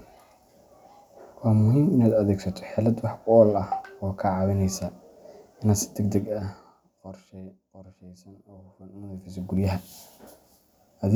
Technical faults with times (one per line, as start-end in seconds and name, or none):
6.14-7.56 zipper noise
8.86-9.82 zipper noise